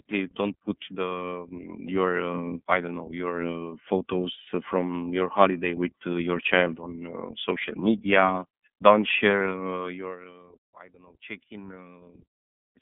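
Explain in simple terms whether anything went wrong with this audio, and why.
Yes, something went wrong. The whole recording passed through the iLBC codec, a phone-call voice coder. It cuts off everything above about 3.7 kHz, so the speech sounds muffled and thin. It works in short 30 ms chunks, leaving a rough, slightly robotic edge.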